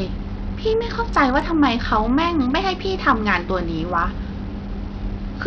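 From start to finish the speech carries heavy Bluetooth SBC compression damage, likely from a starved bit pool pointing to roughly 64 kbps. The weak upper sub-bands lose their bits, so treble drops out and flickers, while coarse quantisation leaves gritty noise and aliasing over the sound.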